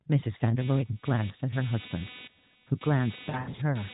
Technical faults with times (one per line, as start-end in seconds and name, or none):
0.59-3.94 computer activity noise
3.30-3.61 lost AMR speech frames